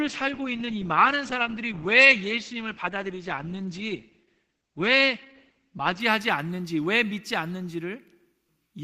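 Speech clip, starting on a low bitrate from an adaptive stream. Until 6.0 s nothing sounds above 8.5 kHz, with stronger codec artefacts, fitting roughly 12 kbit/s Opus. Quality then jumps cleanly, with no gap.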